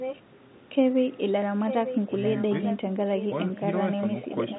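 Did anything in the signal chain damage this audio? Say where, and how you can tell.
Yes, echo leak at call processing: a distinct copy of the speech 894 ms late, not a smeared reverb tail, at 0.0–0.21, 1.66–2.77, 3.18–3.27 and 4.5–4.58 s, fading later, likely from a far-end echo canceller's residue.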